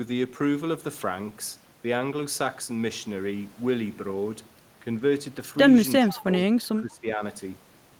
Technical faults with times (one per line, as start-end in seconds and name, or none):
6.03-6.19 echo leak
6.05-6.18 speech suppressed in double talk
6.65-7.22 speech suppressed in double talk